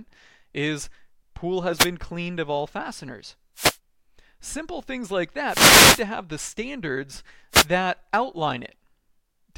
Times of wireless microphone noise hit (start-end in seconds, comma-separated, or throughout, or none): 1.74-1.89, 3.55-3.78, 5.46-6.04, 7.51-7.67